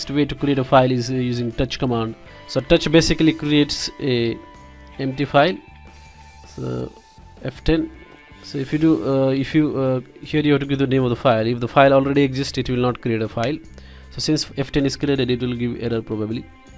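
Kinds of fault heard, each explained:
No audible faults are present in this recording.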